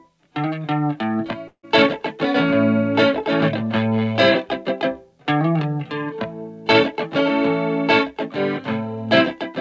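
At 1.48 s the sound breaks off until 1.65 s, most likely a long network dropout. Instead of stopping dead, the last moment is stretched into a fading buzzy tail for about 150 ms before sinking toward silence, and when the audio resumes about 160 ms of material is simply gone. That decaying, smeared fill sets it apart from a clean edit cut or a short packet loss, which would be concealed almost seamlessly. Throughout, the G.722 call path leaves nothing above 8 kHz.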